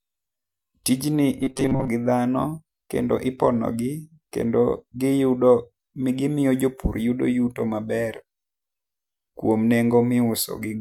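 From 1.41 to 1.88 s the speech becomes a rigid metallic buzz near 134 Hz: robotic sound from repeated short buffers, likely with about half the audio replaced by repeats of a chunk of about 7.5 ms.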